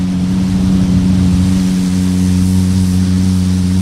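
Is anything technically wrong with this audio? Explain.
Yes. Two related timing faults affect this clip of everyday sounds.

Throughout the clip there is clock drift between sender and receiver. The sender's clock runs about 1.5% slower than the receiver's, so the jitter buffer keeps draining and the receiver has to fill the gap repeatedly. This shows up as small timing hiccups recurring across the whole clip at uneven intervals. Random network jitter or packet loss also produces scattered glitches, but here the disturbance never lets up and always pushes the same way, which points to mismatched clocks.

From 0.06 s to 3.79 s there are repeated timing corrections. To keep pace with the slower sender, the receiver repeats short pieces, so the playback runs at roughly 98% speed and gains around 70 ms over that span. Each edit is small and unevenly spaced, and is heard as a slight hiccup or unsteady tempo. 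A simple resampling error would instead shift the pitch smoothly with no discrete stutters.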